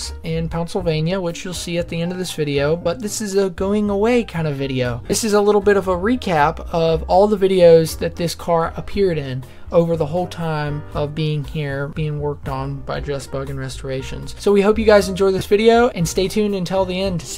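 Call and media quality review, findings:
Lost LE Audio frames at 2.81–2.86 s (45 ms), 5.04–5.12 s (about 60 ms scattered over 75 ms, longest run around 40 ms) and 15.39–15.41 s (22.5 ms): noisy smear where the LC3 decoder repeats the last spectrum with randomized signs, fading on longer gaps.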